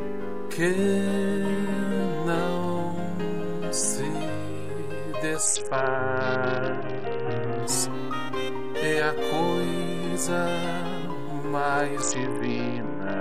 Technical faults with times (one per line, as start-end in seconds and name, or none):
5.46-7.63 Bluetooth SBC bit pool drop
12.01-13.21 Bluetooth SBC bit pool drop